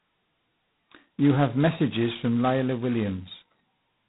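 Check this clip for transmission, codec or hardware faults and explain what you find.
The speech has one fault, present throughout: G.726 ADPCM coding at heavy damage, which fits 16 kbit/s. With so few bits per sample, the prediction error turns into a harsh, rasping hiss that tracks loudness, and nothing passes above 3.9 kHz.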